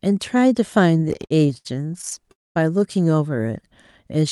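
It's a speech clip carried over a call link, and you can hear the codec's top end stopping around 12 kHz, which fits Opus at about 64 kbps. From 0.97 s to 2.31 s it goes into repeated stalls (stutter): 25 short gaps, the longest 73 ms, where the receiver kept stretching the last bit of sound while waiting on packets that showed up late or too slowly. Nothing is dropped, but about 360 ms of filler, roughly 27% of that stretch, makes the speech drag and judder. Right after, from 2.31 s to 2.57 s, there's a call audio freeze: the sound hangs, fades, and sits nearly silent for about 220 ms before carrying on where it left off, adding a 240 ms gap. That's likely packets getting held up in transit until the jitter buffer emptied completely.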